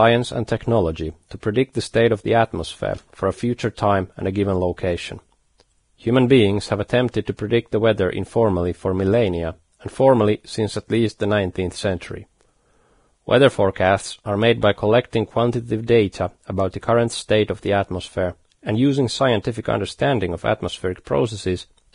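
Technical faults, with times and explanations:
Throughout, Vorbis compression: the speech has nothing above 10.6 kHz, and the remaining treble sounds hissy and grainy, with roughened tones and blurred consonant attacks. This is likely heavy Vorbis coding at a low bitrate, about 32 kbps, which quantises fine upper detail into noise.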